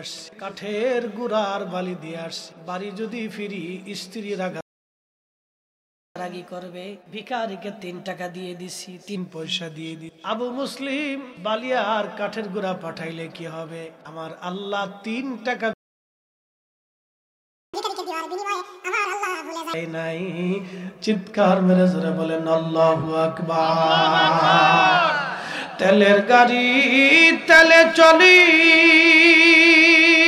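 At 4.61 s the player most likely ran short of data or had its output thread held up, and the result is a playback stall: the sound cuts out mid-flow and stays silent for about 1.55 s, resuming at 6.16 s. A second stall follows at 15.73 s, this time a full 2.0 s gap until 17.74 s. Each break is dead silence, not a fade, so the audio seems to freeze and then pick up again.

After each stall the player works off its backlog by resampling, which gives catch-up at higher speed. From 6.16 s to 9.16 s it runs at 1.1 times normal speed, so the sound is slightly hurried and about a semitone and a half sharp before it settles back. The recovery after the second stall is far more obvious. From 17.74 s to 19.74 s it plays at double speed, raising the pitch by most of an octave into a chipmunk-like rush before it drops back to normal.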